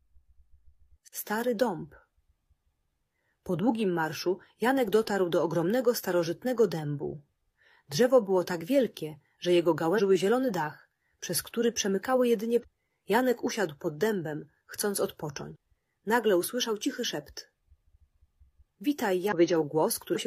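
Five brief bursts of damaged data in a compressed stream occur at 9.94–10.00 s, 12.59–12.65 s, 15.51–15.56 s, 19.28–19.32 s and 20.11–20.18 s, each about 50–60 ms. Corrupted bytes make the decoder misread frames and lose sync until it finds the next frame header, producing a chirp, squawk, click or short hole.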